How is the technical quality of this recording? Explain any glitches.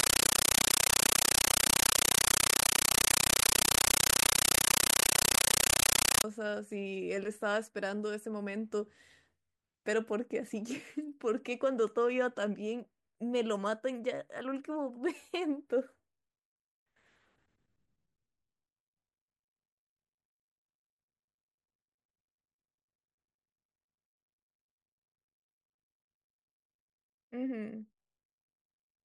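The recording opens with a serious fault: a compressed stream played as audio, from 0.0 to 6.24 s. An encoded Dolby Digital (AC-3) stream reached the output as if it were ordinary samples, with no decoding. Each encoded frame comes through as a 9.33 ms burst of noise followed by silent padding, repeating 31.25 times a second, a pattern that fits an AC-3 stream around 448 kbps. The result is harsh, very loud, chattering static where the speech should be.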